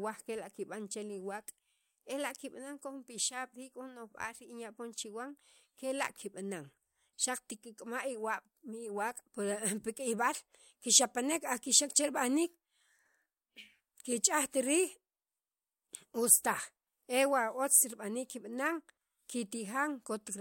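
No technical faults are audible.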